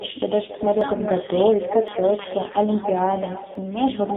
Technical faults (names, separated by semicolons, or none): echo with no canceller; AMR narrowband mobile codec; dropped buffer (overrun)